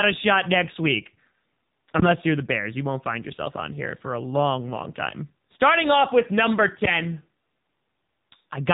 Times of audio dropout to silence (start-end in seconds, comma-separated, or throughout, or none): none